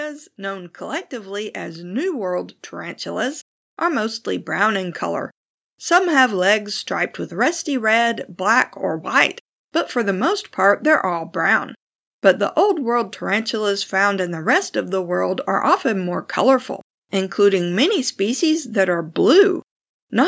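This is speech, passed through call microphone processing with nothing above 8 kHz. From 0.36 s to 6.3 s, automatic gain rising lifts the level by about 10 dB. The control judged the input too quiet. Voice and background swell together before "legs striped with rusty".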